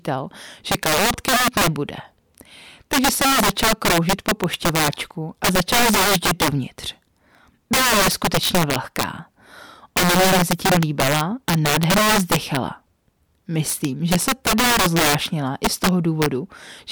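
From the start and through the whole speech clip there is integer overflow. The signal is driven about 12 dB past full scale, and instead of being limited, the peaks wrap around to the opposite sign. This affects somewhat under a tenth of the samples. Clipping would flatten the tops into a buzzy, rounded distortion. Here each loud syllable instead cracks violently, because its waveform jumps across the full range.

Between 0.98 and 1.16 s come two loud pops in quick succession, peaking a few decibels above the speech, which carries on underneath. The likely cause is a brief electrical pulse, such as a switch or static discharge. These are isolated thumps, unlike the overflow cracks that follow every loud peak.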